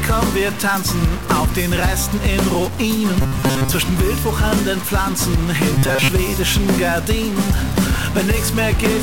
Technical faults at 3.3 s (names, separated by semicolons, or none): stuck bit; robotic sound from repeated short buffers